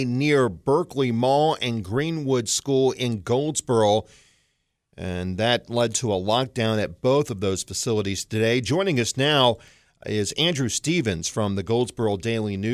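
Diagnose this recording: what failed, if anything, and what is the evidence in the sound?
Nothing in the signal chain fails here: the speech signal holds steady at every stage from capture to playback, with no audible breaks, level disturbances or processing damage anywhere in the recording.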